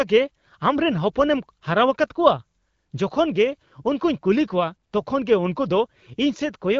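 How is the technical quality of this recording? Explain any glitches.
No glitches or dropouts are audible; the speech comes through an AMR wideband (HD Voice) path whose light coding character fits a rate of about 12.65 kbit/s.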